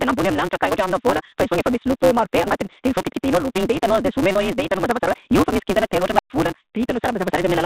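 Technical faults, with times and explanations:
Throughout: block size mismatch (truncated). Each output block loses its tail, which fits a 256-sample read, so a steady buzz at 188 Hz runs under the speech and it plays 1.88 times fast at near-normal pitch. On a spectrogram, evenly spaced vertical seams repeat at that rate.
2.42–2.51 s and 4.33–4.35 s: packet loss with pitch repetition. In the first, 80 ms went missing in short runs of up to 40 ms over a 160 ms span. In the second, 40 ms was lost. The receiver repeated the last pitch period, so each gap sounds like a briefly held, buzzy note. The waveform shows identical repeating cycles with flat, striped harmonics on the spectrogram.
6.17–6.30 s: unstable filter. A tone near 1 kHz swells within about 34 ms as the recursive filter's output runs away. It clips into a loud squeal, then drops to about 213 ms of silence while the filter resets. 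The waveform shows an exploding envelope and then a flat line.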